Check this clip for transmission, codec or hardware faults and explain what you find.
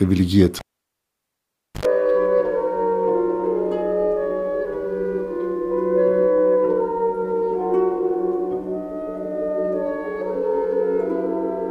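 One hardware fault is present: a live cable pulled and plugged in, from 0.59 to 1.85 s. Breaking the connection cuts the signal with a pop and leaves near silence for 1.21 s. On reinsertion the exposed tip picks up 79 ms of 50 Hz mains buzz before full contact restores the sound with a second pop.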